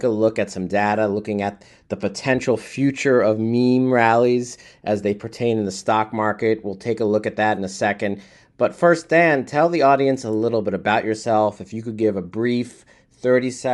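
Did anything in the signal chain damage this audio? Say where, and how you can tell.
Yes, at the codec stage, and the damage is plainly audible for the whole length of the speech. The upper spectrum has a breathy, grainy quality where fine detail has been replaced by noise-like fill. That points to a low-bitrate transform codec, most likely Bluetooth LC3 compression, with a texture that fits 10 ms frames at around 48 kbps, too few bits to code the high bands accurately.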